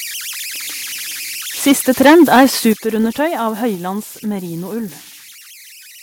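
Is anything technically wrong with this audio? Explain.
Yes, there are a few problems. Throughout, there are converter idle tones: a whistle around 2 kHz, at about 18 dB below the speech, from an undithered delta-sigma converter cycling through repeating bit patterns. From 1.67 to 2.46 s, the peaks are flattened and harsh, running about 10 dB over full scale with about a tenth of samples clipped. That is likely microphone overload. The microphone volume is stepped down twice, at 1.72 s by about 2 dB and at 2.73 s by about 9 dB, each a sudden drop. Both are likely the call software's automatic gain control reacting to the clipping.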